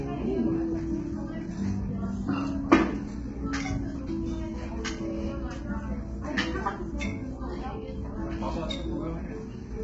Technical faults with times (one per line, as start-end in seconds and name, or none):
0.00-9.84 low-delay AAC compression